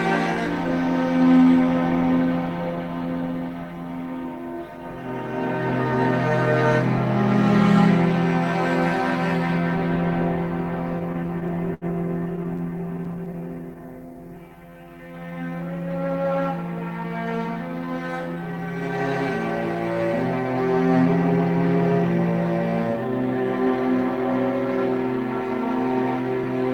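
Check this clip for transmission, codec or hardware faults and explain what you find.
Three transmission faults show up, all from the receiver's jitter buffer.

From 10.99 to 13.78 s there are repeated stalls (stutter): the buffer ran dry 23 times, and each gap, none longer than 75 ms, was bridged by extending the last sound. Unlike a slow-down, the playback halts in jerks rather than stretching smoothly.

From 13.41 to 15.27 s, overlapping the end of the stutter, a jitter buffer slow-down repeats single pitch periods to rebuild a reserve, adding about 263 ms. The audio runs at 86% speed with unchanged pitch, evenly drawn out rather than catching.

From 17.04 to 18.76 s a jitter buffer speed-up trims short pitch-period slices to shed excess delay, about a tenth of a second in total. The audio plays at 106% with pitch intact, sounding slightly hurried, the mirror image of the earlier slow-down.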